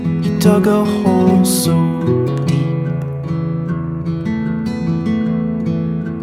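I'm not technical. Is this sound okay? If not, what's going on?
Yes, this music sounds fine; nothing is wrong with it.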